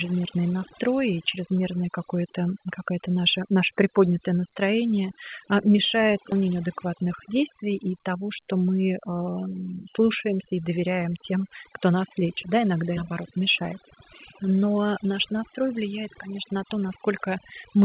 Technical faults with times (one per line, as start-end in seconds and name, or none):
0.00-17.84 overdone noise removal
6.32 skip ahead
6.42-8.30 jitter buffer speed-up